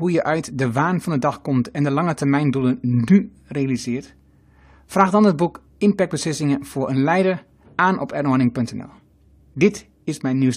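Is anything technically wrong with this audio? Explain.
No, there's nothing technically wrong with this audio.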